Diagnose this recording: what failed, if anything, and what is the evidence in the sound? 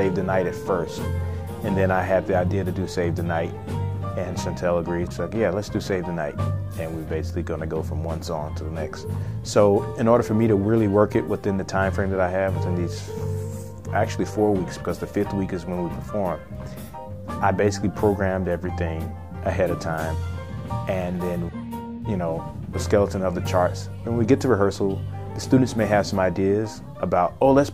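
Nothing stood out on listening to the recording.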